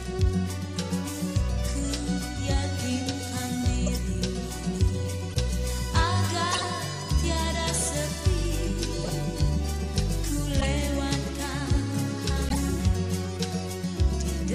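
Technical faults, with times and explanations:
3.86–4.00, 5.30–5.36, 6.50–6.64, 9.01–9.10, 10.60–10.66 and 12.49–12.57 s: corrupt frame decoded. Short chirps and noise bursts lasting a few frames each, loudest near 6.5 s. Damaged compressed frames were decoded anyway, so misread values put energy at the wrong frequencies.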